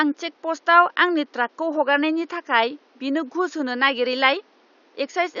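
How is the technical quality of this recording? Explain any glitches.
No glitches are audible in the speech, and the only background is faint room noise sitting about 37 dB below it.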